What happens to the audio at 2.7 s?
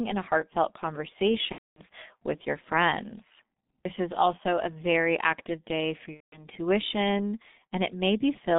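At 2.7 s the speech carries G.723.1 codec damage, present throughout. Its band stops near 3.7 kHz, and its slow, very low-rate coding makes speech muffled, hoarse and blurred.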